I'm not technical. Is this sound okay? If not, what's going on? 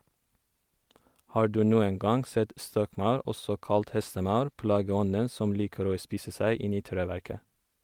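No. Two related timing faults run through this speech.

The first is clock drift between sender and receiver. The device that recorded or sent the audio keeps time with its own clock, and that clock runs a few percent fast compared with the one playing it back. Audio arrives slightly quicker than it can be played. The waiting area that holds incoming sound keeps overfilling, so the player must keep catching up.

The second is repeated timing corrections. To catch up, the player keeps trimming tiny slices out of the audio, from about 0.15 s to about 7.6 s. The overall effect is like playing at 104 percent speed. The trims are small and unevenly spaced, so they come across as faint hiccups or a slightly rushed, uneven pace rather than clear gaps.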